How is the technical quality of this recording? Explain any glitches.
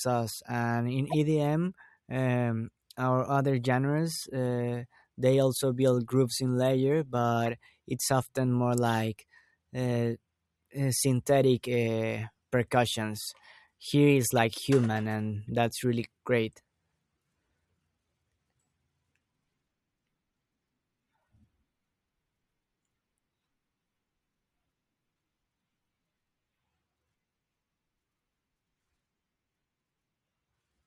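Four brief glitches break into the speech, all of the same kind: corrupt frame decoded. They come at 1.10–1.15 s, at 8.89 s just after "it's often more", at 14.38 s just before "human and", and at 15.49 s just after "human and". Each is a short chirp or burst of noise, loudest at the first (peak about -20 dBFS) and faintest at the last (about -45 dBFS). Flipped bits in a compressed frame made the decoder misread gains or codes and put energy at the wrong frequencies, so each burst lasts only about as long as the one or two damaged frames.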